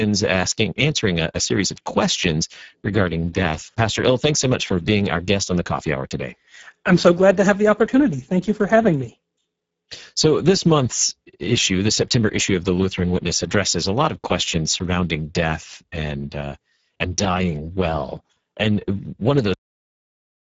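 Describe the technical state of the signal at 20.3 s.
At 20.3 s the signal is digital silence. A cut-off end begins at 19.54 s and runs to the end of the clip. The final stretch of audio was never written out, so the speech stops mid-sound with no decay or fade. On a waveform the trace drops straight to a flat silent line at 19.54 s and stays there. A spectrogram shows a sharp vertical edge, then empty black to the end.

The Speex codec damage present throughout the clip no longer has any effect at this point, because no signal remains for the codec to shape. Before the cut, the low-bitrate CELP coding, which fits a setting near 10 kbps, leaves the speech plainly noisy and hoarse. Its spectrum has a hard ceiling at 7.7 kHz. The upper band below that ceiling looks like smeared, noise-like fill rather than clear harmonic structure.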